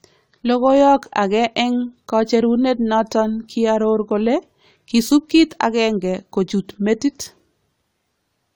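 Speech with generation loss throughout sounds swirly and hollow with blurred consonant attacks, likely from roughly seven AAC-LC passes near 96 kbit/s. On a spectrogram, flickering holes appear below 20 kHz.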